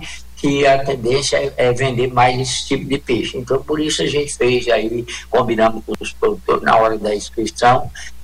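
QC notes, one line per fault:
No fault found in this clip.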